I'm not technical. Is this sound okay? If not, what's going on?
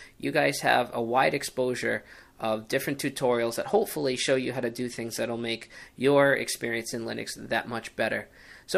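No. Bluetooth SBC bit pool drop, 3.30 to 5.69 s: a crowded wireless link cut the data, so the treble dulls and a gritty noise creeps in.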